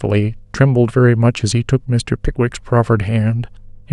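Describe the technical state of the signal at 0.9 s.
A steady low tone at 50 Hz, with some low harmonics, sits under the speech at 0.9 s and throughout the clip, roughly 35 dB below it. This is mains hum: a ground loop or nearby transformer coupling the power line into the signal.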